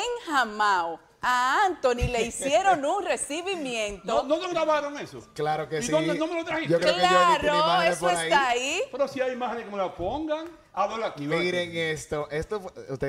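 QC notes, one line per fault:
The signal shows no technical faults at any point.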